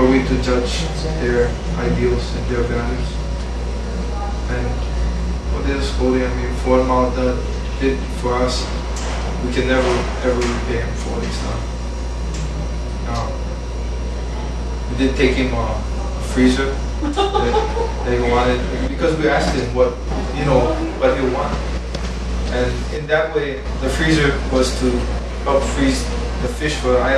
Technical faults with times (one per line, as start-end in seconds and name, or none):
none